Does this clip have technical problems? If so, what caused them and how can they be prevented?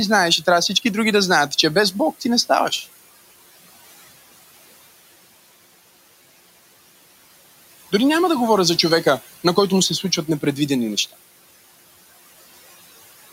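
Yes. Noise suppressor artifacts run throughout: the suppressor pulls bands it judges to be steady noise down by about 16 dB frame by frame, so the room noise, sitting about 19 dB below the speech, dips between phrases and swells back beneath them. Lowering the suppression strength or reducing the room noise at the source would prevent it.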